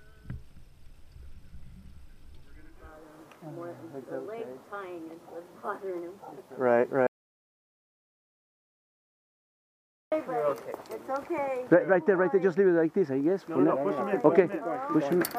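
From 7.07 s to 10.12 s the input was likely lost, through a dropped connection or mute, while recording continued writing silence. This audio dropout to silence cuts the sound off mid-flow for about 3.05 s of silence, with no room tone, before it returns abruptly.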